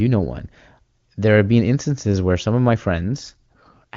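Just after "where some of my", at 3.02 s, an AMR rate drop sets in and lasts to the end. The bandwidth stays the same and nothing cuts out. The speech turns rougher and more synthetic, which fits the codec stepping down from 23.85 to 8.85 kbit/s.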